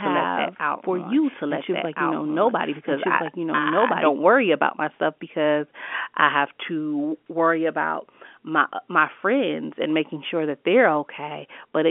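From the start to 4.1 s, a doubled audio track plays: a dry, equally loud copy trails about a second and a half behind, likely from a second capture path. It stops abruptly after "for you", before "worry about myself because".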